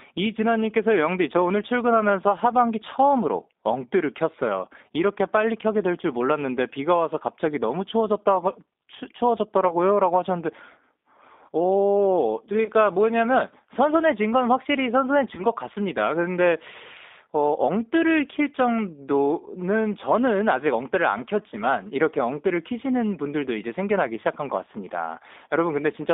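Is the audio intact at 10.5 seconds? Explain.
No. At 10.5 seconds, as throughout the clip, the speech has passed through a G.729 codec, with a narrowness and roughness that fit an 8 kbit/s stream. Each 10 ms frame is rebuilt from a vocal tract filter, a pitch predictor and a few pulses, within a line band of about 250 Hz to 3.7 kHz. The speech therefore sounds thin and muffled, with a plainly audible rough, synthetic texture.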